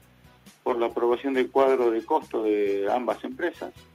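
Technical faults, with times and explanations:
No technical faults can be heard in this audio. Nothing in it calls for a time or an explanation.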